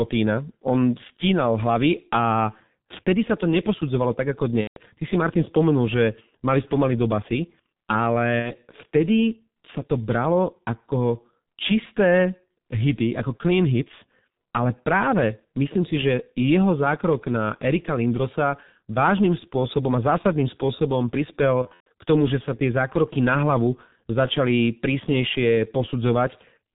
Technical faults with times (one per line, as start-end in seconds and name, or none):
0.00-26.74 G.723.1 codec
4.61-4.79 VoIP packet loss concealed by the speech codec
8.39-8.55 VoIP packet loss concealed by the speech codec
21.62-21.87 VoIP packet loss concealed by the speech codec